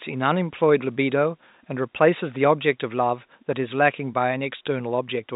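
No technical fault in this speech clip: it is telephone-band G.711 mu-law audio with nothing above about 3.8 kHz, and the room's background noise sits about 45 dB below the speech.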